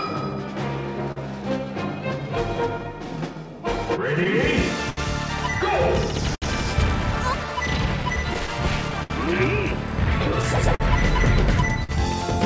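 Clock drift between sender and receiver runs through the whole clip. The sending clock appears to run roughly 5 percent slow against the receiver, so the jitter buffer keeps draining faster than it refills. The receiver has to keep stretching the audio, which leaves small timing hiccups at uneven intervals from start to finish. All of this sits on top of the call-codec path, whose band stops at 8 kHz.

At 1.12 s comes the first short stall from a late packet. The buffer ran dry, and the receiver held the last sound for 43 ms until the packet turned up, then resumed where it had stopped. Nothing is lost, but that moment is drawn out by 43 ms, with a faint buzzy sustain or dip up to 1.18 s.

From 1.65 s to 7.48 s the receiver makes repeated timing corrections, all lengthening the audio to cope with the slow sender. Playback in this stretch runs at 98 percent speed, adding roughly a tenth of a second overall. 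Each repeated sliver is tiny, so what comes through is a slightly slack, unsteady tempo with the odd soft hiccup rather than any clear break.

Between 4.24 s and 4.99 s packets fell behind repeatedly, giving repeated stalls (stutter). The buffer emptied three times and 91 ms was filled in, about 12 percent of the span, with the longest wait 69 ms. The receiver carried the last sound forward each time, fading it in the longer wait, so the passage drags and catches briefly before moving on.

At 6.35 s a second short stall from a late packet holds the sound for 68 ms, through 6.44 s. This stretch is longer than the first one, with a sustained, slightly buzzy hold, though nothing is missing afterwards.

A second stutter runs from 8.03 s to 9.12 s, with five stalls. Together they fill 107 ms, about 10 percent of the span, the longest being 68 ms. The repeated holds make the audio limp along with several small catches in quick succession.

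From 10.42 s to 11.91 s there are scattered short gaps: about three isolated late or lost packets, each patched by continuing the previous sound. Roughly a tenth of a second is filled in all, the longest patch around 50 ms. They come through as brief ticks or smears against otherwise clear audio.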